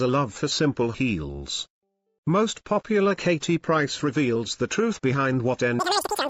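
From 5.79 s to 6.30 s the sound races at triple speed, pitched about 19 semitones high: a wrong sample rate, which fits 16 kHz audio played back at 48 kHz.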